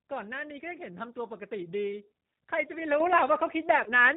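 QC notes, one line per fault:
throughout: G.729 codec. The audio is carried at 8 kbit/s by a codec that rebuilds speech from a vocal-tract filter, a pitch predictor and a few coded pulses per frame. That makes the plainly audible damage a rough, faintly synthetic texture, consistent with G.729A. On a spectrogram, energy stops abruptly at 4 kHz with nothing above. Harmonics look smeared and grainy rather than cleanly striated, and the waveform lacks fine high-frequency detail.
3.84 to 3.91 s: VoIP packet loss concealed by the speech codec. About 20 ms of audio went missing, which fits a single lost 20 ms packet. The decoder filled the gap by stretching its last pitch and filter state, so the sound briefly smears into a sustained, fading buzz or coloured noise. The following frames build on that guessed state, so the sound stays weak until about 3.91 s. On a spectrogram the spectrum freezes into flat horizontal bands, and the waveform shows a smooth decaying envelope.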